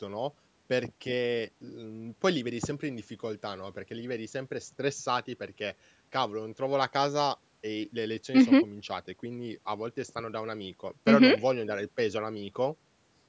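No technical faults can be heard in the speech. It has been through a call's microphone processing, which trims the lowest bass and leaves nothing above 8 kHz, and that is normal.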